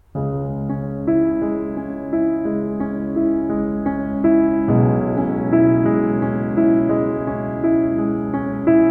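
The music runs without any audible technical fault at any point.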